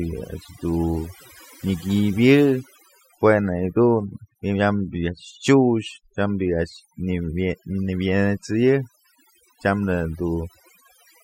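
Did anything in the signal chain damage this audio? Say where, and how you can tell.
Yes, the damage comes from overdone noise removal in the call processing, and it runs through the whole speech clip. Listen to the gaps between phrases: the background drops to near silence but leaves little twinkling specks behind. A suppressor pushed too hard clamps individual frequency bands down whenever they sit close to its noise estimate, so the softer parts of the voice get carved out along with the noise.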